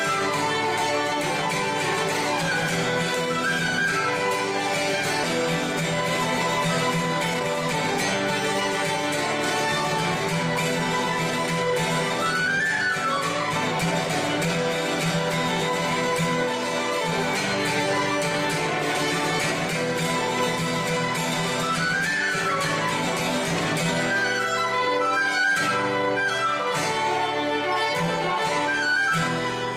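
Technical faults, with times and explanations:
5.23 s, skip ahead: playback jumps forward with no gap and nothing filled in. Roughly a second and a half of audio is missing, and the material on either side is butted together. A stretch of audio was dropped while later audio was already queued, so the receiver simply carried on from the newer material. Unlike a dropout or concealment, there is no silence, fade or smeared fill, just an abrupt join where the audio suddenly continues further along.
7.33–7.46 s, jitter buffer speed-up: for about an eighth of a second the audio rushes at 160% speed while its pitch stays put. The buffer was holding more than its target, so the receiver trimmed out short pitch-period-sized pieces in quick succession, removing around 70 ms in total to cut the delay. That separates it from a skip, which has one hard jump, and from a pitch or resampling fault, which would change the pitch along with the speed.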